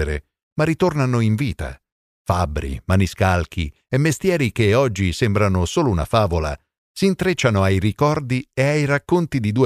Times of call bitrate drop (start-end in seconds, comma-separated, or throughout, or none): none